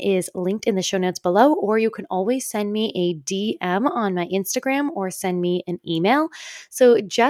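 Nothing in the speech here stands out as a technical fault, so there's nothing to flag anywhere along the way.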